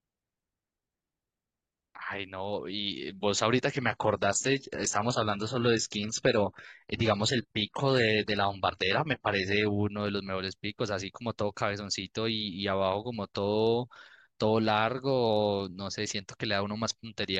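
It's a speech recording, and the issue is an adaptive stream at a lower bitrate. At 3.75 s the quality drops abruptly with no gap, and it stays degraded until 9.75 s before snapping back. In that stretch the top end turns thin and synthetic and codec smearing creeps in, which fits a switch from roughly 96 kbit/s AAC down to a 16 kbit/s HE-AAC rendition when the connection slowed.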